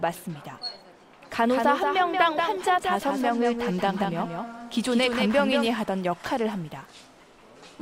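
From about 1.40 s to 5.66 s there's a doubled audio track: a second full-band copy of the sound trails the original by roughly a fifth of a second, only a few dB quieter. It has no decay and no room colour, so it reads as a flat slapback rather than an echo, and it cuts in and out abruptly at both ends. Most likely a second, slower capture path got mixed in for that stretch.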